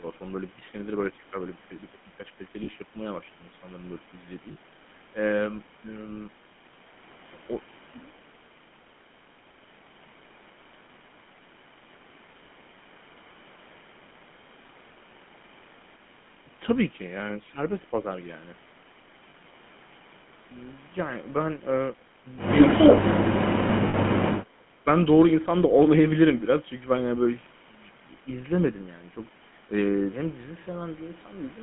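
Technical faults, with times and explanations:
Throughout, GSM full-rate codec: the whole clip has that buzzy, gravelly GSM texture, which fits the 13 kbps full-rate coder. The band runs only from about 150 Hz to 3.4 kHz. The pulse-driven excitation model is what makes the voice sound rough.
2.64 to 2.69, 4.52 to 4.56, 19.3 to 19.35, 23.88 to 23.95 and 30.64 to 30.67 s, lost GSM frames: you hear short metallic, ringing smears lasting 20 to 60 ms. The decoder filled each gap by repeating the last good frame, so the sound hangs briefly instead of dropping out cleanly.
23.14 to 23.77 and 24.26 to 24.87 s, speech suppressed in double talk: the voice sinks by about 30 dB in the first stretch and about 20 dB in the second, and each stretch is roughly half a second of reduced level. The likely cause is the echo canceller clamping down because both ends were talking at once.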